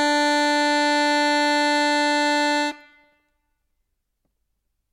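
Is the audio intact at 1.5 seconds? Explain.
Yes, the music at 1.5 seconds plays through cleanly with no audible fault at that moment.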